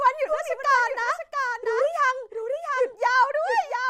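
Throughout, a doubled audio track: the speech repeats about 0.7 s later, a little quieter and undecayed, likely from a second capture path, showing as a shifted duplicate spectrogram pattern.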